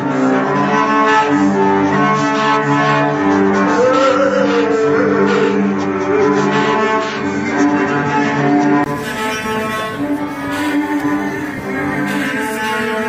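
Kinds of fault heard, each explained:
Input switched to a poorer device: for the first 8.86 s the system was likely recording through a lesser input that passes nothing above 7.6 kHz. That makes the opening sound dull and boxy, carrying its own faint noise floor some 50 dB below the signal. At 8.86 s a brief 20 ms gap marks the changeover to a better input. The sound then brightens as the missing top end returns, and the level shifts by roughly 5 dB.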